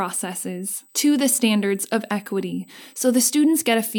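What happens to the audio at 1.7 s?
At 1.7 s the speech carries a USB whine. It is not a one-off event, since it runs through the whole clip. The tone sits at 8 kHz, and its strongest component is the harmonic at 16 kHz. The bus draws current in 125-microsecond microframes. That periodic load leaks into the audio through power or ground. It is heard as a thin, steady, high-pitched whine, roughly 35 dB below the speech.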